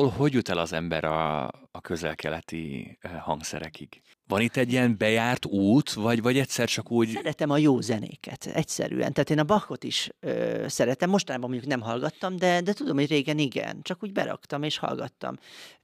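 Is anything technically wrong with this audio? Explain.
Yes. At 0.39 s, before "el az ember a", dropped samples cause a sharp click. A few samples likely vanished, so the waveform jumps, leaving a thin vertical spectrogram line.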